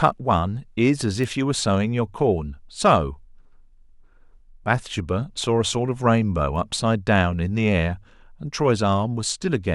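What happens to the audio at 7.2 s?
Nothing goes wrong at 7.2 s; the speech continues intact through that point with no dropout, click or distortion.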